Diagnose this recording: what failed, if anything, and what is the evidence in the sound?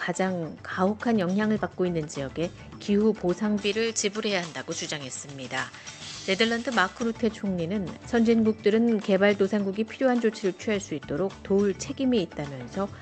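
Pre-emphasis left on, at the recording or transmission stage: from 3.61 to 7.02 s the treble rises steadily, about 11 dB by 10 kHz, following a J.17-style boost with no matching de-emphasis. Unlike a resonant microphone peak, the tilt is smooth and confined to that span, all beneath the call codec's 8 kHz band limit.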